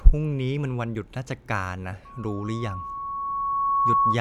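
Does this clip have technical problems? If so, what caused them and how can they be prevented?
Yes. From 2.05 s to the end, loudspeaker feedback squeal: a 1.1 kHz tone swells over roughly two seconds to about 5 dB above the speech as the mic-speaker loop exceeds unity gain. Prevent it by lowering monitor gain, increasing mic-to-speaker distance, or notching 1.1 kHz.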